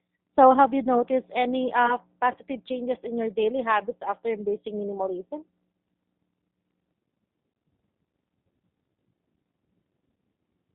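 Throughout, the speech carries plainly audible G.729 codec damage: nothing above 4 kHz, a rough, synthetic texture from pulse-based rebuilding, consistent with an 8 kbit/s G.729A stream.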